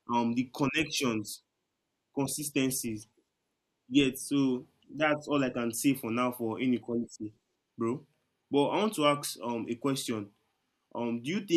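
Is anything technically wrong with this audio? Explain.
No, I hear no technical faults in this speech recording.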